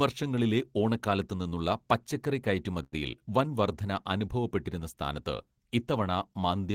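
At 2.83 to 2.94 s the speech hangs in a short stall from a late packet: the jitter buffer emptied, and the receiver stretched the preceding sound for about 90 ms, losing nothing but running 90 ms later afterwards. On a spectrogram, frozen horizontal harmonic bands; in the waveform, repeating cycles.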